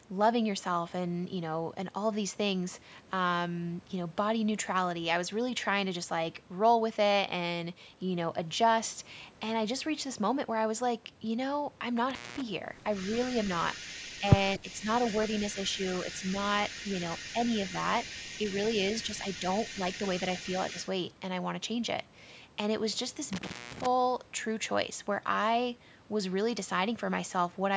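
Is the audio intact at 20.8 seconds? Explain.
No. From 12.93 to 20.89 s an echo leak runs through this point: a faint copy of the speech, about 15 dB below it and trailing by 255 ms. The likely cause is a far-end loudspeaker whose echo canceller let its microphone pickup through and back.

Just before, from 20.73 to 20.78 s, there is speech suppressed in double talk: a brief dip of a few decibels. The likely cause is the canceller turning down both its own talker and the echo while the two sides overlapped, unable to separate the talker from the echo.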